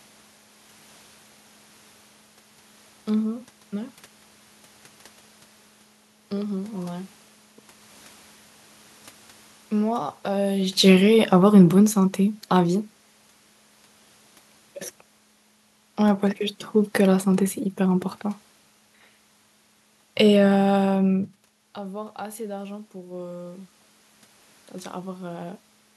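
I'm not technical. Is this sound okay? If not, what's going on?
No. There are two spots where the loudness drifts on its own.

From about 9.72 to 12.82 seconds, the voice and the room background behind it sink together over roughly three seconds. This is automatic gain falling. The recording device has a built-in volume control that judged the sound too loud and turned itself down gradually. It reacted around the point where the talker shifted position, near 10.5 seconds, but the shift itself is normal.

From about 21.75 to 23.77 seconds, the voice and the room background swell up together over about two seconds. This is automatic gain rising. Just before, around 21.0 seconds, the talker moved and the voice reaching the microphone got much quieter. The same automatic control noticed and slowly turned itself back up, bringing the background noise up with it. The movement is normal, but the slow, audible swell is the control at work.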